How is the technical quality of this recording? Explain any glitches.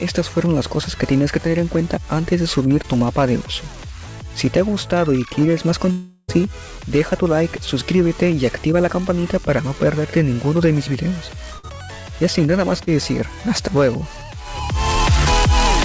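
The recording has four network glitches, at about 2.8, 5.9, 11.6 and 12.8 seconds. The audio passed through a call codec consistent with G.722 at 64 kbps, so nothing is heard above 8 kHz.

Short concealed packet loss occurs at 2.82 to 2.85 s and again at 12.84 to 12.88 s. Each time, about 20 ms of audio failed to reach the decoder in time. The receiver patched the gap by extending the preceding sound before rejoining the real signal, leaving a brief smear or wobble.

A long network dropout runs from 5.91 to 6.30 s, most likely from packets failing to arrive for nearly 0.4 s. Roughly 380 ms of audio is gone. For about 370 ms the receiver stretched the last sound into a fading buzz or hiss, ending in a short silence before the audio picks up further on.

A burst of packet loss spans 11.58 to 11.67 s. Packets carrying about 60 ms of audio were lost or arrived too late. For about 50 ms the receiver held and faded the last sound as a buzz or hiss, then resumed with that stretch missing.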